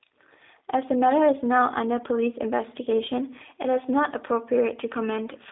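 Throughout, the speech passed through a G.729 codec, which fits an 8 kbit/s link. It strips everything above 3.8 kHz and leaves a rough, slightly synthetic tone.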